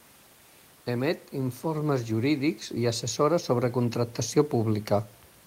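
From 0.86 to 5.17 s, automatic gain rising lifts speech and background together by about 8 dB. The waveform envelope widens steadily, and the spectrogram brightens gradually, including the room noise floor about 32 dB below speech.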